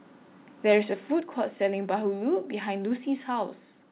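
From 0.68 to 0.75 s the loudest syllable turns harsh and crackly, likely from microphone overload: the input ran about 4 dB past the converter's limit, so a small share of peaks were sliced flat. The waveform shows squared-off tops, and the spectrogram shows a brief smear of broadband energy across the band.

At 1.2 s the level drops abruptly by about 4 dB, voice and background together, which points to the microphone volume being stepped down, likely by the call software reacting to the preceding distortion. The waveform envelope shows a clean downward step, and the spectrogram dims uniformly at that instant. Throughout, the spectrogram shows no energy above 4 kHz, consistent with a narrowband call codec such as G.711.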